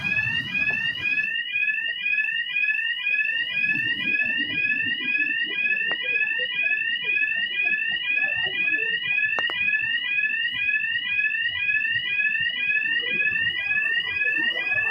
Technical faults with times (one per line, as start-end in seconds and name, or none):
5.92-5.94 loud pop
9.39-9.52 loud pop